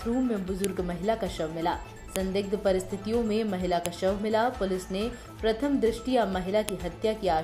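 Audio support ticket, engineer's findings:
File header played as audio: sharp clicks at 0.64, 2.16, 3.86 and 6.69 s. Joined WAV segments kept their headers, and the header bytes play back as samples.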